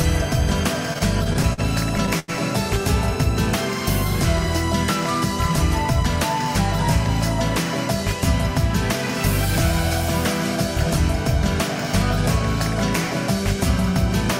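From 0.93 to 1.60 s there is repeated stalls (stutter): packets arrived late, the jitter buffer emptied six times, and the receiver held the last sound through each wait, the longest about 45 ms. Around 104 ms is filled in, nothing is lost, and the sound drags and stutters.

At 2.19 s a short stall from a late packet follows. One packet missed its slot, so the last sound is stretched for 88 ms until it arrived, and playback then resumes from the same point 88 ms later, with a held sound and a slight buzz or dip.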